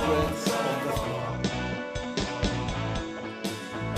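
At 0.91 s the digital radio blends to analogue FM over about half a second: level drops about 2 dB, and faint hiss appears. Unlike a codec cutoff, hiss accompanies it, and it blends back at 3.68 s.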